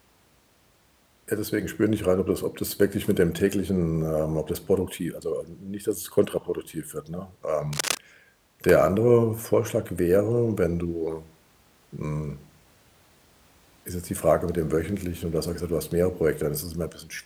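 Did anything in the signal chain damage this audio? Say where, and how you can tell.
Yes. From 7.73 to 7.98 s a dense, uneven scratching rustle sits over the speech, only a few decibels below it. This is cable scratch noise in the analogue wiring, likely a worn cable or connector shifting so its contact resistance fluctuated rapidly.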